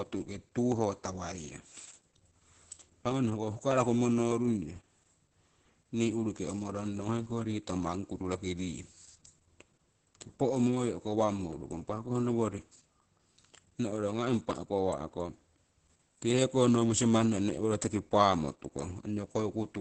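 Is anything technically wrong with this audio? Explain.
Yes. Throughout the speech, Opus voice compression at a very low bitrate, which fits roughly 10 kbps, makes the SILK predictive coder quantise the excitation coarsely and cut the band to wideband. Nothing survives above 8.6 kHz, so the speech sounds muffled, hoarse and somewhat robotic.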